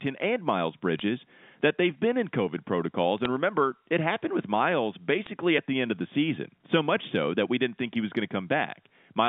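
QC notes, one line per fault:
0.99–1.02 s, 3.18–3.26 s and 5.26 s: bit errors on a digital phone line. Flipped bits on the G.711 A-law link corrupt single samples, at a rate of a few tenths of a percent. Each is a sharp tick or brief crackle over the speech, just before "that they've been in" and "remember it happened with".
1.61 s: audio missing between chunks. A short piece of audio, around 30 ms, drops out at a chunk boundary. The sides are butted together with no gap, so the speech skips abruptly just before "that they've been in". This likely comes from processing in blocks of about 4 s.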